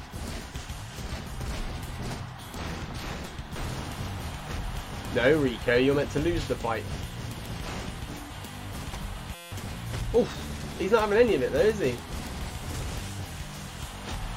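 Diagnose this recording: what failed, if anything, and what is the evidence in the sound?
The driver or host stalled while the audio interface kept replaying its ring buffer. That is a system hang loop. From 9.35 to 9.52 s the sound is replaced by one 5.8 ms fragment repeated about 30 times. Because the fragment is so short, the repetition fuses into a steady buzz at 172 Hz rather than a stutter, which fits a 256-sample buffer. Roughly a fifth of a second of real audio is lost underneath it.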